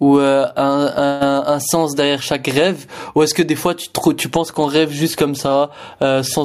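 Gain pumping runs through the whole of this speech clip. The input gain was likely set far too high, so a fast limiter or compressor clamps down on each loud syllable and then lets go in the pauses, with a gain swing of around 10 dB. As a result peaks and quieter passages sit unnaturally close in level, leaving the speech sounding flattened.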